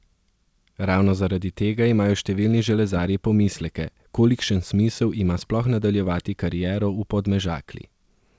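No faults can be heard in the speech, which carries the band-limited character of a wideband call path, with nothing above 8 kHz as fits a codec such as G.722, and the usual coding noise such a path adds.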